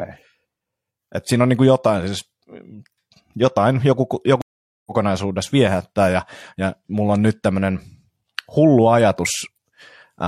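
At 4.42 s, right after "jotain joku", the speech cuts to about 445 ms of silence, a stream reconnect: the connection dropped and a fresh decoder restarted mid-stream. At 4.92 s the audio resumes roughly a third of a second further on, so that stretch of speech is skipped.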